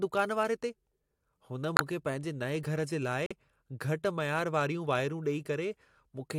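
Abrupt gaps of silence cut the speech at 1.76 to 1.81 s, just before "मूंखे पंहिंजे", and at 3.26 to 3.32 s, after "घर जे". Each is a corrupt frame muted: the decoder rejected damaged compressed data, which fits two frames each time, and silence was substituted without shifting the timing.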